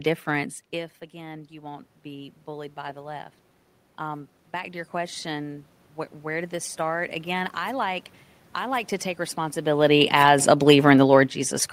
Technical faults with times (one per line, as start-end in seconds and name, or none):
0.71-3.35 automatic gain rising
9.69-11.73 automatic gain falling